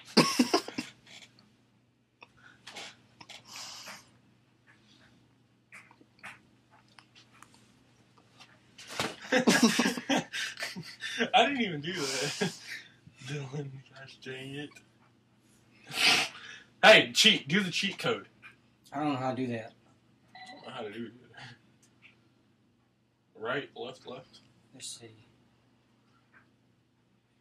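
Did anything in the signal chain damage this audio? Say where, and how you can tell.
No, nothing in the signal chain audibly damaged this audio, and every stage from capture through to playback is carrying the signal intact.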